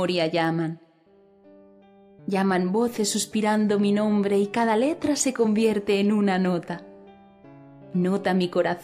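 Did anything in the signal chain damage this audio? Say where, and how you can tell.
Yes: a bit error spike at 0.45 s, one sample jumping to about -22 dBFS, points to a flipped bit in memory or a digital link. Its isolated, full-band tick differs from analogue crackle or a dropout.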